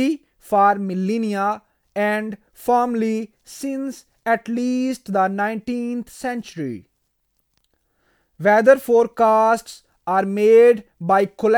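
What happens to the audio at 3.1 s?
Nothing goes wrong at 3.1 s; the speech carries on intact through that moment with no dropout, click, distortion or other fault.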